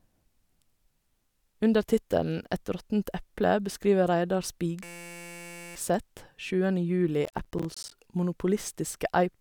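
At 4.84 s the speech gives way to a system hang loop lasting until 5.75 s. The machine or its driver stalled while the sound hardware kept replaying the same 5.8 ms stretch of its ring buffer, which fits a 256-sample buffer. Repeated well over a hundred times, that sliver becomes a steady buzz at 172 Hz. Its constant pitch and perfectly even repetition set it apart from crackle. Essentially no speech is lost around it.

From 7.25 s to 7.92 s comes processor overload crackle. The processor fell behind and missed a run of audio deadlines, around twenty of them. Each short buffer, roughly 10 ms, went out as silence, cutting tiny hard-edged gaps into the speech. The result is an irregular gritty tearing laid over the sound rather than a tone. Unlike the hang loop, it has no steady pitch and nothing repeats, and it stops once the load eases.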